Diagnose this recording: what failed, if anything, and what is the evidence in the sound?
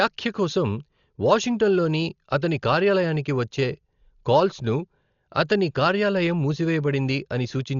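The codec stage failed, and it did so for the whole length of the speech. Nothing is heard above 7 kHz, so the voice is dull and boxy. A rough, fluttering noise hangs around voiced sounds. The damage is heavy and continuous. The cause is likely Dolby Digital compression at a very low bitrate, around 40 kbps. Starved of bits, the encoder narrows the band and leaves many frequency lines without detail. The decoder then fills those lines with noise.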